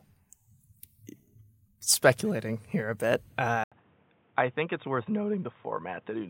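Speech, with a brief gap of about 80 ms at 3.64 s. From there to the end, the sound turns dull, with nothing above 3.8 kHz, about 5 dB quieter and with faint new background noise. The input likely switched to a poorer device.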